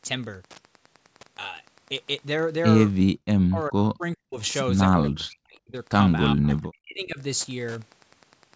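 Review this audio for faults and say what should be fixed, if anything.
There's a steady tick running under the whole clip, roughly ten a second, which is Wi-Fi interference. A nearby radio's beacon, every 102.4 ms, is getting rectified in the audio circuit, sitting something like 30 dB below the speech. Keep the phone or router farther from the mic and cabling, or use shielded leads.

At 3.09 to 3.20 s the room sound ducks hard, about 40 dB, for roughly a tenth of a second. That's background gated by the echo canceller: it clamped the mic while the loudspeaker played, then let go. Gentler suppression settings or a better echo reference would stop it.

The speech itself dips by up to about 40 dB at 3.48 to 4.37 s, 4.97 to 5.74 s and 6.34 to 7.19 s, for around half a second or more each time. It's likely speech suppressed in double talk, with the canceller muting the near talker while the far side spoke. 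Headphones on the near end, or a canceller with proper double-talk detection, would fix it.

The top end stopping at 8 kHz is just the call's microphone path.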